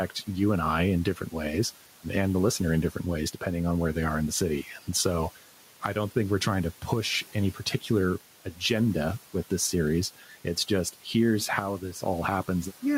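Throughout the clip the background sinks between words and rises again beneath them. These are noise suppressor artifacts: the suppressor pulls down, frame by frame, the bands it judges to be steady noise, here by about 11 dB. The room noise underneath, about 20 dB below the speech, belongs to the recording itself.

From 10.18 to 10.57 s, after "with this series" and before "just here's how", parts of the speech go faint and swallowed, dropping by up to about 9 dB across roughly 150 ms in all. This is speech cut by the noise suppressor, which mistook those quieter stretches for background noise.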